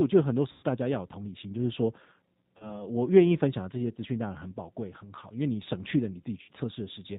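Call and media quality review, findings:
Rough, slightly synthetic speech throughout, band-limited with nothing above 4 kHz. G.729 codec (G.729A at 8 kbit/s): speech rebuilt from a vocal tract filter, pitch predictor and sparse pulses per 10 ms frame, so fine detail is lost and texture turns grainy. Codec damage plainly audible across the whole clip.

Buzzy tone or coloured noise, stretched and fading out, 0.52–0.65 s. VoIP packet loss concealed by the speech codec: about 110 ms of audio lost, decoder extrapolating last pitch and filter with falling gain.

Same stretch-and-fade, 2.57–2.83 s, audibly weak past the 30 ms gap as the predictive state recovers frame by frame.

Short stretched smear, 6.42–6.51 s, about 60 ms lost, same concealment mechanism.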